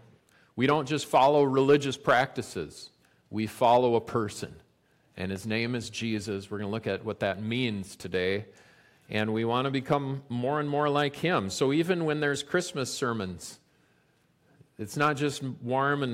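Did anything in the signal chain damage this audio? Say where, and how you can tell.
No, nothing stood out on listening that would point to damage at any stage of the signal chain.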